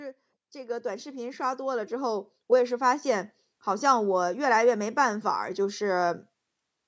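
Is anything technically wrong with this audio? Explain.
Yes. Automatic gain rising runs from 0.52 s to 5.05 s. The automatic gain control judged the incoming level too low and raised its gain step by step, about 13 dB in total over roughly four and a half seconds. Because the gain applies to everything at once, the speech and the background noise swell together. The clip grows steadily louder instead of holding a steady level. The call microphone processing leaves nothing above 8 kHz, which is expected for that path.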